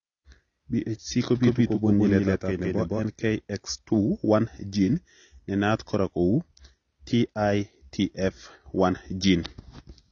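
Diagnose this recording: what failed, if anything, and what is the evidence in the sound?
Codec stage: the whole speech clip sounds dull and smeared, with nothing above 7 kHz. That's heavy AAC compression, likely AAC-LC at a low bitrate around 24 kbps.

Doubled audio track from 1.43 to 3.03 s: a full-band copy trails at equal level, roughly 150 ms behind, dry and cutting in and out abruptly. Likely a second, slower capture path.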